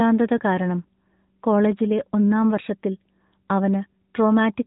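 Throughout the speech, an AMR narrowband mobile codec is plainly audible: nothing passes above 4 kHz, and the vocal-tract model rebuilds each 20 ms frame from sparse pulses, giving a buzzy, synthetic edge that fits a mid-rate mode near 10 kbps, unlike simple band-limiting.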